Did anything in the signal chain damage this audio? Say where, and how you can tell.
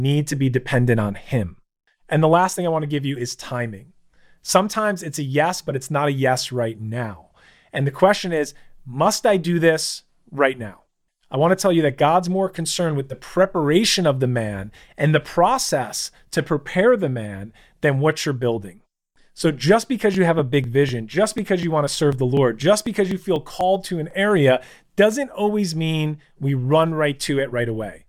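Yes: periodic USB or driver dropouts, 20.14 to 24.11 s. Regular ticks every 0.25 s, where the driver stalls and skips a couple of milliseconds of speech.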